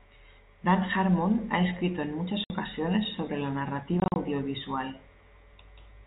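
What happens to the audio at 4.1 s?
Around 4.1 s the speech breaks into a rapid stutter of dead gaps with hard edges, spread from 4.00 to 4.16 s. This is packet loss filled with silence: about 100 ms of audio is missing across that 160 ms stretch, the longest single hole lasting 40 ms, and the receiver played nothing in their place. The gap lengths fit 20 ms packets dropped from the G.711 telephone stream.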